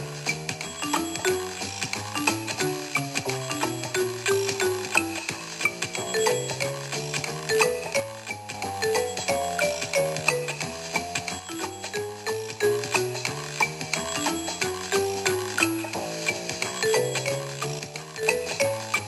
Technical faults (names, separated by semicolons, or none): one channel drops out